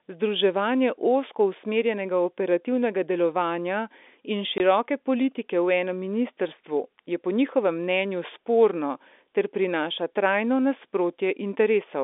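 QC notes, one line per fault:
4.58–4.60 s, packet loss filled with silence: one 20 ms packet dropped and filled with silence, giving a hole; the waveform shows a flat gap, the spectrogram a vertical blank stripe across the telephone band.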